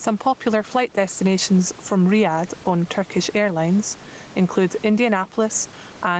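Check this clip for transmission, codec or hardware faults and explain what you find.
One fault runs through the whole speech recording: gain pumping. The likely cause is input gain set far too high for the microphone, with a fast limiter or compressor clamping down on every loud syllable. The level swings by around 10 dB. The room noise sits about 30 dB under the speech. Loud and soft passages sit unnaturally close together, so the speech sounds squashed. The call path's Opus coding, which points to a rate near 20 kbps, cuts everything above 8 kHz.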